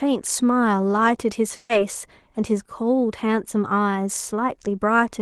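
At 0.33 s, the stream likely lost a sample or so, letting the waveform jump straight to a later value. That discontinuity is far too brief to remove any speech, but it produces one sharp click, a thin vertical line in the spectrum: a case of dropped samples.

From 1.55 to 1.71 s comes a burst of packet loss: about 140 ms of audio never arrived in time. The receiver filled the gap by stretching the last sound and fading it down, and the speech then picks up further on, with that stretch missing.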